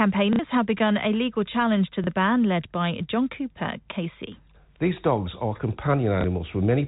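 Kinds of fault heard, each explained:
Packet loss with last packet repeated: a short robotic stutter at 0.33 s lasting 60 ms, and small blips at 2.04 s and 6.21 s lasting 30 ms each. The previous chunk of telephone-band speech was replayed to fill gaps, which fits 30 ms packets.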